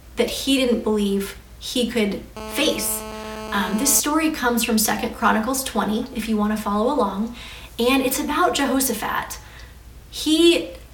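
GSM phone buzz runs from 2.37 to 4.00 s: a hard, raspy tone at about 217 Hz, thick with harmonics and unrelated to the rest of the sound, sitting about 11 dB below the signal. A nearby 2G handset transmitting in bursts 217 times a second is the cause, with the audio circuit rectifying the radio pulses into audible buzz. The tone holds steady throughout, which fits the phone being on a call rather than transferring data.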